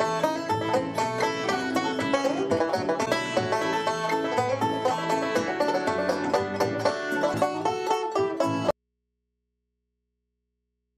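Damaged data in a compressed stream appears at 3.02 to 3.08 s and again at 7.30 to 7.35 s. In both places the decoder misreads corrupted frames, loses sync and has to hunt for the next valid frame header, which briefly disrupts the audio. An audio dropout to a faint residue begins at 8.71 s and runs to the end. The sound cuts off abruptly, leaving only mains hum around 55 dB below the signal. This is likely caused by the wanted signal being lost while the downstream path stayed live and picked up hum from the open input.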